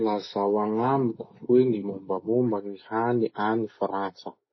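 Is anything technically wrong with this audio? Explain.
Yes. Throughout the speech nothing reaches above 6 kHz and the sound is plainly dulled and smeared, likely AAC compression near 24 kbps discarding high-frequency detail.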